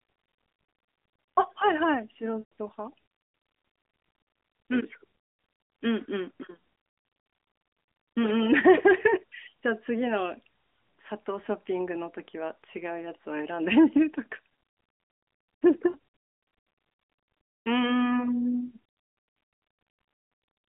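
Lost AMR speech frames at 2.4 s, 15.9 s and 17.4 to 17.6 s: corrupted frames failed their checks, so the decoder repeated the last good pitch and vocal tract settings at falling gain. The 40 ms gap dips briefly, while the 120 ms and 220 ms runs smear and fade out.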